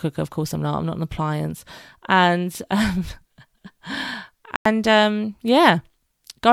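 A digital broadcast dropout hits this speech recording: the receiver lost lock or rejected corrupted frames and muted its output from 4.56 to 4.66 s. Roughly 96 ms of speech vanishes into a sudden silent hole, consistent with three lost frames, before the programme resumes.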